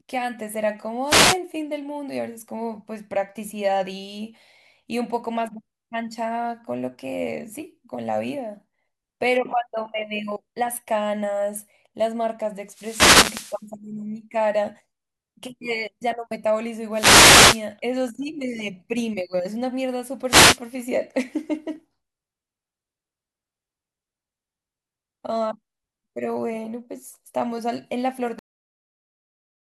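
The radio link from an analogue FM wireless microphone fades four times as reflected signals cancel at the receiver, letting receiver noise rise over the speech. Each wireless microphone noise hit comes through as a swish or burst of static: a short one from 1.07 to 1.38 s, the longest from 12.66 to 13.65 s, another from 16.92 to 17.65 s, and a brief one from 20.27 to 20.59 s.

At 28.39 s the final buffers of the recording were never written, producing a cut-off end. The speech stops abruptly mid-sound and drops straight into digital silence with no natural decay, leaving the last utterance truncated rather than finished.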